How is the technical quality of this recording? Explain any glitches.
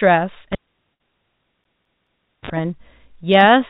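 There are two clear glitches, both within the first 2.5 s of the clip. It all comes through a narrowband call path, with nothing above 4 kHz, which points to a telephone codec such as G.711.

From 0.52 to 2.50 s there's a cable pulled and plugged in. A live lead comes out with a pop, the audio drops to near silence for about 1.3 s, then a brief 46 ms burst of 50 Hz mains buzz as the plug's tip touches first, and another pop when it seats.

Overlapping that, from 1.64 to 2.28 s, you get a CD stuck on one turn. A scratch keeps kicking the laser back, so one 213 ms chunk plays three times, with a tiny mute at each jump. It's that quick, even, mechanical skipping-disc stutter.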